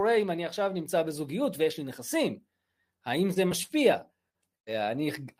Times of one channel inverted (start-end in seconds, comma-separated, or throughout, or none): none